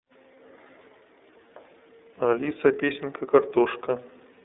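From start to finish the speech carries iLBC codec damage, and it is plainly audible. The narrow 250 Hz to 3.6 kHz band and the rough, slightly synthetic texture point to iLBC running with 30 ms frames, which fits its 13.33 kbps mode. Each frame's excitation is coded on its own. On a spectrogram, energy stops flat at about 3.8 kHz with nothing above, and the lowest band is thin.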